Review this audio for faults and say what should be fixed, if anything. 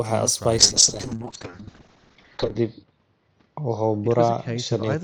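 A call bitrate drop starts at 0.58 s and lasts to the end of the clip. The speech turns rough and muffled. The top end disappears above 8 kHz, down from a full band reaching 20 kHz. The coarseness fits the encoder falling from about 40 kbps to about 6 kbps. The bandwidth estimate fell, so the encoder spent far fewer bits. It stays at its worst for about 2 s and does not recover. To prevent this, keep network headroom stable and let the bitrate step down gradually, not in one sharp cut.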